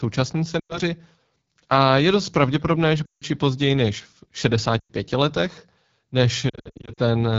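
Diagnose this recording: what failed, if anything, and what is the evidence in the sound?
The speech sounds rough and raspy throughout, with a buzzy, grainy edge and a hissy top end. The failure is at the codec stage: the AMR wideband (HD Voice) codec is running at one of its lowest modes, which fits the 8.85 kbit/s rate. At that rate the pulse-driven vocal tract model can't capture the voice's detail below 6.4 kHz, and the band above is only shaped noise.

At 0.59 to 0.79 s, 3.05 to 3.25 s, 4.79 to 4.93 s and 6.49 to 7.00 s the voice drops to near silence within two frames, then returns weak and rough. These are lost AMR speech frames on the network leg. Bad frames fail their checksum, so the decoder replays the last good pitch and vocal tract settings at falling gain. The second gap sits between "je dost pravděpodobné že" and "i později než v", and the third follows "i později než v". 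The last stretch is a scatter of short dropouts, none longer than 60 ms.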